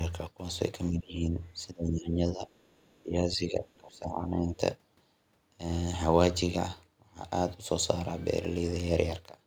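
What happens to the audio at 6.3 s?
Nothing goes wrong at 6.3 s: the speech continues intact through that moment, with no dropout, click, distortion or other fault to be heard.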